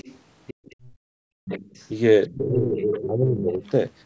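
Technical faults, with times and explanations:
0.0–0.18 s, 0.47–0.89 s, 1.45–1.88 s and 2.7–3.06 s, other side's voice leaking through: a second, fainter voice sits under the talker. It is very quiet at first, around 25 dB below the speech, then grows steadily more prominent until it is only about 5 dB down near 2.7 s. The likely cause is loudspeaker playback reaching the microphone and not being fully removed by the echo canceller. On a spectrogram it appears as a separate set of harmonic stripes overlapping the main voice, strengthening with each burst.
0.54–1.45 s, background gated by the echo canceller: the room sound is pulled down sharply, dropping by about 34 dB at its deepest, for roughly 0.7 s within this span, before returning around 1.45 s. The canceller clamped the microphone hard while the loudspeaker played, which is why the background is heard to vanish and then come back. 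The waveform shows the noise floor collapsing almost to a flat line, and the spectrogram shows the background haze going dark across the band, which tops out at 8 kHz.
2.29–2.76 s and 3.03–3.63 s, speech suppressed in double talk: the talker's voice dips and thins in pieces. It falls by roughly 25 dB in the first stretch and about 15 dB in the second, over roughly 0.4 s and 0.5 s. This overlaps the strongest burst of leaking far-end sound, so the likely cause is the canceller turning everything down when both sides spoke together. On the waveform the speech envelope shows notches and chopped segments, and the spectrogram shows the upper harmonics fading or breaking off.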